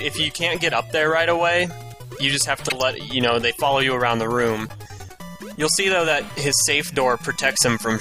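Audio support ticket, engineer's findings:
Corrupt frame decoded, 2.65 to 2.82 s. Short burst of misplaced energy, chirp- or noise-like, peaking at about -5 dBFS. Component: decoder. Flipped bits, wrong gains or codes played as-is. Length points to about seven damaged frames.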